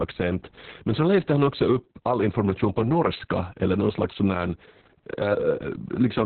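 Opus voice compression runs throughout the speech, from start to finish. The coder is squeezing the signal into its narrowband SILK mode, so nothing survives above 4.3 kHz and the excitation is coarsely quantised. The voice sounds heavily muffled, hoarse and faintly robotic, which fits a very low bitrate around 6 kbps.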